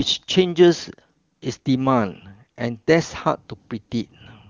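No technical faults are audible.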